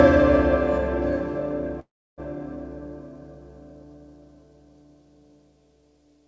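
From 1.80 to 2.20 s there is a call audio freeze: a brief fading continuation of the last sound gives way to about 0.31 s of silence, then the sound resumes exactly where it stopped. Unlike a dropout, nothing is lost. The stream simply runs about 0.38 s later, likely from packets stalling until the jitter buffer emptied. The band stays capped at 8 kHz throughout, which fits the G.722 call path.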